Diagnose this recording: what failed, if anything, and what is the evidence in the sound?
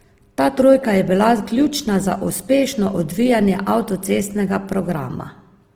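Throughout, the speech sounds grainy, rough and noisy yet keeps full bandwidth: likely Opus compression in CELT mode at the codec stage, starved near 16 kbps.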